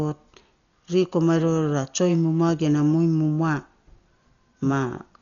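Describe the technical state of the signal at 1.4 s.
At 1.4 s the speech carries heavy damage that runs through the whole clip and is likely from Dolby Digital compression, at a rate the sound suggests is near 40 kbps. Nothing reaches above 6.9 kHz, so the voice sounds dull. Many frequency lines get no mantissa bits, and the decoder fills them with dither noise, giving a rough, fluttering haze around voiced tones. A spectrogram shows a hard ceiling at 6.9 kHz and speckled, noisy gaps between harmonics.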